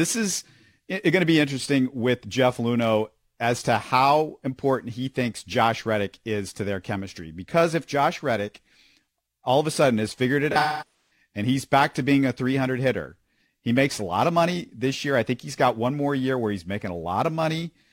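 The converter's sample clock wanders throughout the clip, which is sample clock jitter on the order of a few microseconds. Each sample is taken slightly early or late, and the resulting error scales with how steeply the waveform is moving, sitting around 30 dB below the speech. It comes across as a fine hiss or grit riding on the speech, strongest on loud and bright sounds such as sibilants, and gone in the pauses.

From 10.51 s to 11.11 s, between "sudden has figured it" and "and he's back to", the stream suffers AAC frame loss with concealment. About 0.47 s of audio is missing, scattered across roughly 0.6 s, which fits around eleven lost frames, and the longest gap runs about a fifth of a second. The decoder patches each hole from the last good spectrum, so the speech turns smeared, noisy or phasey.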